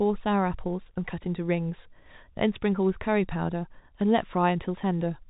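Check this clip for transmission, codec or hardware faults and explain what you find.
Listening through the speech, nothing stood out as a transmission, codec or hardware problem.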